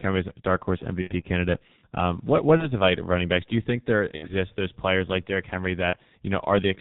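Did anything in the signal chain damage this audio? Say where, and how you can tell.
Yes. The G.723.1 codec damage runs through the whole clip. The speech is muffled and hoarse, with nothing above 4 kHz and consonants smeared together. That fits heavy coding at around 6.3 kbit/s. This codec packs the signal into 30 ms frames and redraws its model of the voice only slowly, so fine detail and rapid articulation are lost at the codec stage.

VoIP packet loss concealed by the speech codec shows up at 1.01–1.11 s, 2.57–2.71 s, 4.16–4.32 s and 5.90–5.97 s. At each point the speech turns briefly into a buzzy tone or coloured noise that fades. Each gap sounds like one or two missing 30 ms frames, about 30 to 60 ms, lost on the network. The decoder filled them by repeating its last pitch and filter at falling gain. Because each frame builds on the one before, the speech stays thin for a short while after packets resume.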